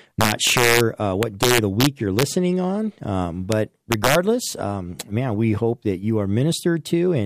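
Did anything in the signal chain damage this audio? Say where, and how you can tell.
Yes. Integer overflow damages the speech from 0.21 to 0.81 s, 1.23 to 2.23 s, 3.92 to 4.15 s, and at a single instant at 3.52 s. This points to a fixed-point gain or sample-format conversion stage. Loud peaks pushed only about 1 dB past full scale, and barely at all at 3.52 s, yet each one wraps to the opposite extreme of the range instead of being held there. The result is harsh, violent cracks that are far sharper than ordinary clipping.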